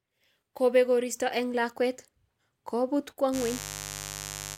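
From 3.31 s to the end of the clip at 4.57 s, a mains buzz sits under the speech. It is a steady, raspy buzz built on 50 Hz. Sharp switching spikes leak into the signal path twice per mains cycle. These spikes carry harmonics of 50 Hz well up into the kilohertz range, which gives the buzz its rough edge. It is loud, roughly 10 dB below the speech. It does not fade before the clip ends.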